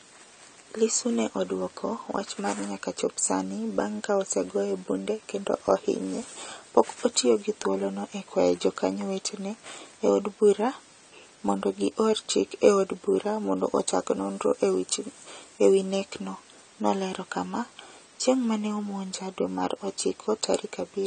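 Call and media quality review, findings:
AAC compression throughout, likely a low-bitrate AAC-LC encode that fits about 32 kbps: coarse quantisation and a cut-off near 9 kHz leave speech plainly dull and smeared, with fizzy sibilants.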